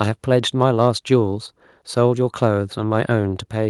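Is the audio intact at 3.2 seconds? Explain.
Yes, the speech at 3.2 s plays through intact, with no audible fault at that moment.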